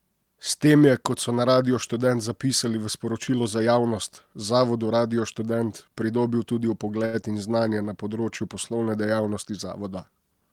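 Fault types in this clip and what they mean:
Short stall from a late packet: After "pridobil tudi", near 7.05 to 7.15 s, a sound is held about 80 ms too long while playback waits. Nothing is lost.
Short concealed packet loss: Right after, at 7.21 s, about 20 ms never arrived. It was patched by continuing the previous sound, leaving a brief smear.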